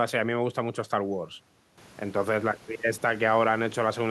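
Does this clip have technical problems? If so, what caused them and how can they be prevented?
No, the speech signal shows no technical faults; the only background is the room's own noise, which rises by about 12 dB around two seconds in but stays about 28 dB below the speech.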